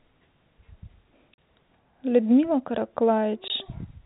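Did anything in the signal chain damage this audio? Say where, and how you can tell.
Yes, at the network stage: packet loss filled with silence leaves dropouts at 1.34–1.38 s (40 ms) and 3.48–3.50 s (20 ms), consistent with 20 ms packets replaced by silence.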